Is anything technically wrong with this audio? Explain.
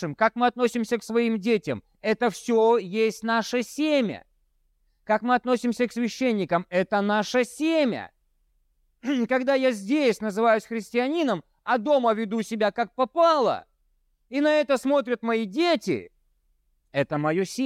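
No, nothing in this speech recording stood out as technically wrong on listening.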